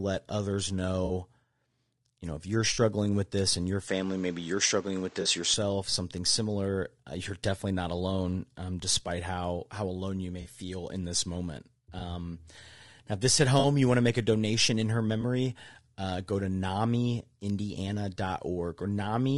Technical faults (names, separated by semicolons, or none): low-delay AAC compression; AAC frame loss with concealment; input switched to a poorer device